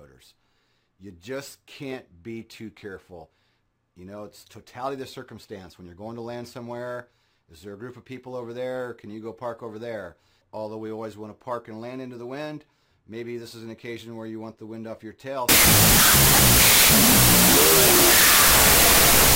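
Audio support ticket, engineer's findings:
Wrong sample width, 15.49 s to end (19.35 s): 32-bit float data decoded as 16-bit integer, each sample split in two. Result: loud noise, buried sound at half speed, an octave down.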